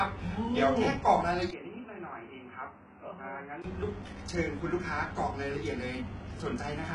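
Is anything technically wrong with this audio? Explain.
Yes. Throughout, the speech was likely squeezed through HE-AAC compression at a very low rate, heavy enough to fit around 12 kbps. Only the lower band is truly coded, and the treble up to 11 kHz is rebuilt from copied lower bands, so sibilants sound gritty, lispy and metallic.

From 1.51 to 3.64 s, the recording likely switched to a poorer input device. A short 20 ms gap marks the change. Nothing passes above 3 kHz, so the speech turns dull and boxy, drops roughly 10 dB, and carries a faint new background noise before clearing again.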